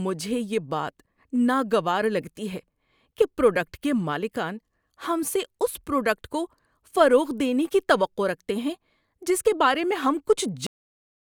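Speech, with a cut-off end at 10.67 s. The sound stops mid-utterance and drops straight to digital silence, with no decay. The final buffers were never written or played.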